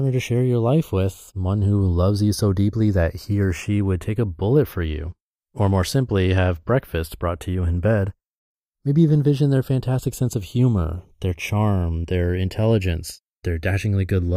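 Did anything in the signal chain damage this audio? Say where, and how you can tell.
Yes. Throughout the speech there is a slow flanging, a whooshing sweep that moves gradually through the spectrum, which points to the channels drifting apart at the converter stage. The two channels were captured by devices on separate clocks, mismatched by something like 70 parts per million, so the delay between them creeps steadily and reaches about half a millisecond by the end. When the channels are summed to mono, that sliding offset forms comb notches that sweep slowly.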